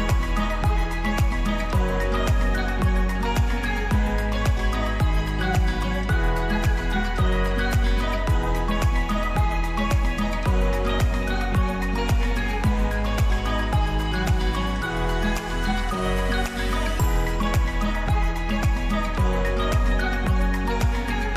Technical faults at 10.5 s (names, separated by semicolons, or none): none